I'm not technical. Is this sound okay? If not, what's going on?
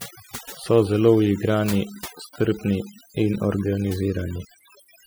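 No. Throughout the speech there's overdone noise removal: a cleanup tool set too hard keeps switching parts of the sound off, so pauses fall near-silent with twinkling specks. Unlike ordinary hiss, the background doesn't stay steady.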